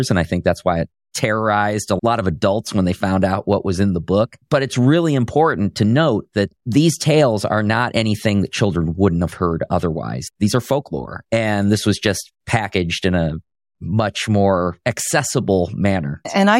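From the start to 11.62 s, the speech carries sample clock jitter. The converter's clock wanders, so each sample is taken a little early or late. The timing error is around half a microsecond. It matters most where the waveform changes fastest. The result is a faint hiss or roughness riding on the speech, roughly 50 dB below it. It grows on loud and bright sounds and drops away in the pauses.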